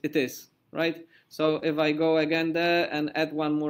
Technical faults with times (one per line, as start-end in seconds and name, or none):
1.59-1.63 short concealed packet loss